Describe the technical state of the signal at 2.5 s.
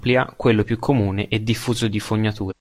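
Between 2.47 and 2.53 s the speech hits damaged data in a compressed stream. Corrupted bytes make the decoder misread the frames and lose sync until it finds a valid frame header. The result is a brief glitch, heard as a chirp, squawk, click or short hole, and seen as an abrupt waveform discontinuity.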